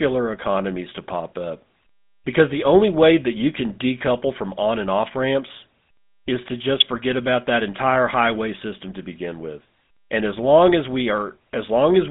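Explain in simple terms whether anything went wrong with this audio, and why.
Yes. Throughout the speech, the GSM full-rate codec is audible. It rebuilds the voice from a simple model of the vocal tract driven by a coarse pulse pattern. That leaves a buzzy, gravelly roughness and cuts off everything above 3.8 kHz, so the speech sounds narrow and phone-like.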